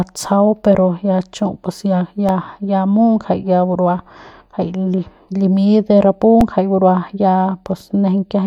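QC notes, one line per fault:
2.29 s and 6.41 s, underrun with held sample: the output buffer ran dry and the converter held its last value, leaving flat waveform stretches of 0.83 ms and 5.33 ms (the longer fits a 256-sample buffer). Roughly 0.7 ms and 5 ms of speech were lost.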